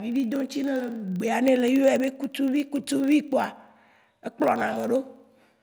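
A filter restarted on every block runs through the whole of this speech clip, heard as a buzz at 25 Hz whose loudness follows the level of the speech. The filter discards its internal state at each block boundary and begins the next block as if from silence, so every block opens with a small transient. Repeating 25 times a second, these ticks point to blocks of about 40 ms.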